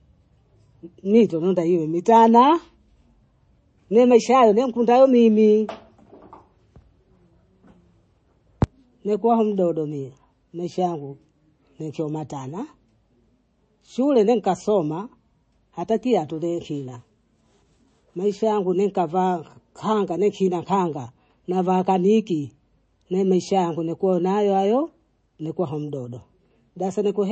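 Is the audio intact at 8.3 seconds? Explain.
No. From 8.06 to 8.67 s, just before "nikuwa mdodo mie maisha", there is processor overload crackle. The processor misses a long run of tiny buffer deadlines, on the order of a millisecond each, and skips them. The result is a gritty tearing burst rather than a single click or dropout, and it ends once the load eases.

Underneath, the whole clip is dull, with nothing above 8.3 kHz, and has a watery, swirling texture. That is likely MP3 compression at a low bitrate, around 32 kbps. Unlike the crackle, this damage is steady across the clip and smears the sound rather than breaking it.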